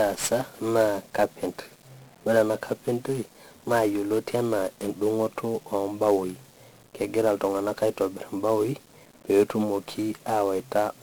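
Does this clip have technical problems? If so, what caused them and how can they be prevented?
Yes. Throughout the speech, 1-bit DFPWM compression codes every sample as a single up-or-down step of an adaptive level, which fits a rate around 48 kbps. The heavy quantisation noise makes everything fuzzy and crackly and buries the treble in hiss. To prevent it, encode with a multi-bit codec at a higher bitrate.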